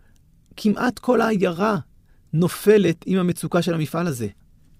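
Speech recording with no audible technical faults.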